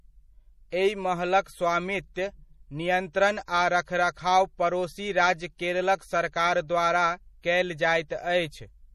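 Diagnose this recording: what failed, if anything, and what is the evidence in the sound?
MP3 compression, present throughout the speech, is the likely cause of the damage heard here, and it sits at the codec stage. The band stops dead at about 15.1 kHz, the fixed treble cut most encoders impose. The damage is plainly audible as a watery, swirling texture, with sibilants turning metallic and consonant attacks smeared. That level of damage fits a low bitrate around 40 kbps, where weak frequency lines drop in and out from frame to frame.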